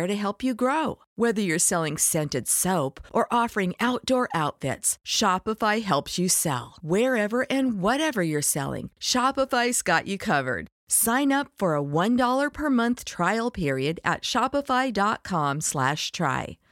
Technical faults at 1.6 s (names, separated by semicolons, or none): none